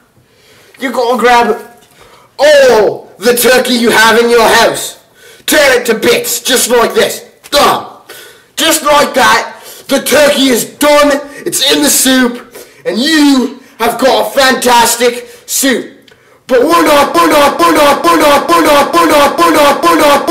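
A stall in the player, encoder or stream likely left it resending the last fragment it held, starting at 17.15 s and continuing to the very end. From that point the audio turns into a broken-record loop: a 0.45 s piece repeats exactly, back to back, seven times, with identical timing on every pass. Whatever should have played over those final three seconds is lost, replaced entirely by the stuck fragment.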